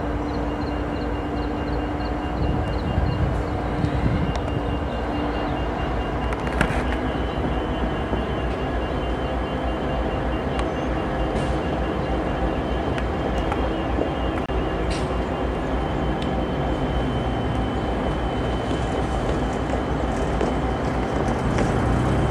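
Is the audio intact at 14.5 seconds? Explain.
No. The sound drops out for 27 ms at 14.46 to 14.49 s, then resumes where it stopped. This is a gap at a join of encoded pieces, with the encoder's start delay and end padding left in.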